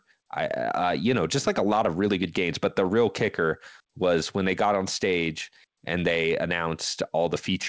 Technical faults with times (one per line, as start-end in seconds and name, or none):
none